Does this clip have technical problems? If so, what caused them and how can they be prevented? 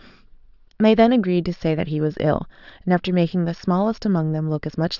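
No, the speech signal shows no technical problems that call for a cause or a preventive step.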